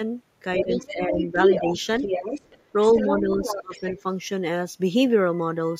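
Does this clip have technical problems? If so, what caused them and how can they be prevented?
Yes. Other side's voice leaking through appears at 0.58–0.86 s, 1.19–1.25 s, 1.43–2.63 s, 2.87–3.21 s and 3.4–4.01 s. A second voice sits under the speech, around 5 dB below it in most stretches, roughly level with it from 1.43 to 2.63 s, and nearer 10 dB down in the last stretch. This is likely loudspeaker playback reaching the microphone that the echo canceller failed to remove. Using a headset, or an echo canceller that adapts faster, would prevent it.

Speech suppressed in double talk occurs from 0.6 to 1.7 s and from 3.2 to 4.04 s, overlapping the leaked voice. The talker's speech dips by about 10 dB in the first span and about 20 dB in the second, with roughly 0.7 s and 0.5 s affected. Likely cause: the echo canceller could not tell the near talker from the echo and turned everything down. 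Better double-talk detection, or a headset that removes the echo, would prevent it.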